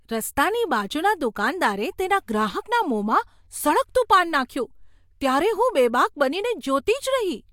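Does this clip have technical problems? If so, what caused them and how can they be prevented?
No, nothing in this speech recording stood out as a technical problem on listening, so there is nothing to trace or prevent.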